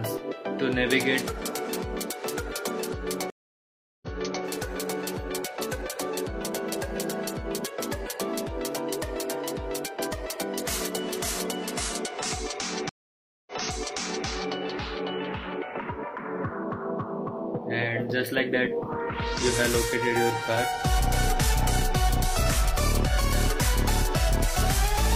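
Stream reconnects at 3.3–4.44 s and 12.89–14.26 s: the connection dropped and a new decoder restarted mid-stream, leaving 0.72 s and 0.58 s silences, then audio resuming 0.42 s and 0.79 s earlier, repeating material.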